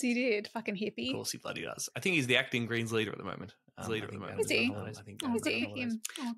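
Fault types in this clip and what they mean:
Doubled audio track: From 3.82 s to the end, a second full-band copy of the speech runs about a second behind, roughly 5 dB quieter, with no decay or room colour, cutting in abruptly. Likely a slower second capture path or misaligned edit.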